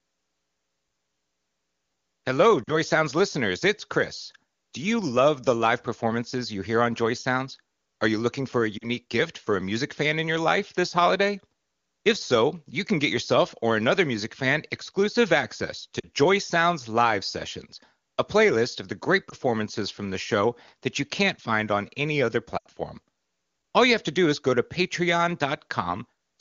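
Radio errors corrupted AMR wideband frames, and the decoder concealed these lost AMR speech frames by reusing the last good settings. This gives brief drops toward near silence at 2.63–2.72, 8.78–8.88 and 16.00–16.07 s, a brief warbling dip at 19.29–19.35 s, and a longer drop to near silence at 22.57–22.67 s.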